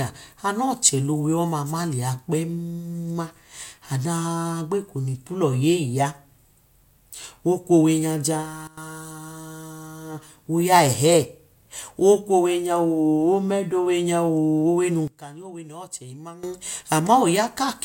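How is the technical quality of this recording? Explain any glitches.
The recording has two level glitches. Sudden gain jump at 8.67 s and 15.08 s, right after "owe num": the level abruptly drops by about 15 dB for 0.1 s, then by about 17 dB for 1.36 s, with speech and background noise falling together, likely from an unramped digital gain change.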